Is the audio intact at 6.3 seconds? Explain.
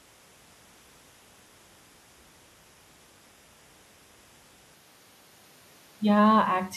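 Yes, the audio is intact at 6.3 seconds, with no audible fault at that moment.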